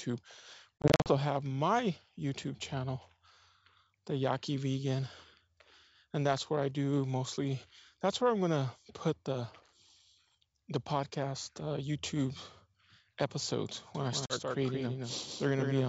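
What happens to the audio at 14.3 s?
A doubled audio track runs from 13.95 s to the end of the clip. A second full-band copy sits about a fifth of a second behind the original and about 5 dB quieter. It cuts in abruptly at 13.95 s with no decay or room colour, which likely means the audio was captured twice through a slower path.

Within that stretch, packet loss on an ADPCM call occurs between 14.26 and 14.36 s. A hard-edged 40 ms hole of silence, consistent with about two lost packets, is followed by speech returning with some distortion. The receiving decoder's adaptive predictor and step size drifted from the sender's during the gap and need some tens of milliseconds to resynchronise.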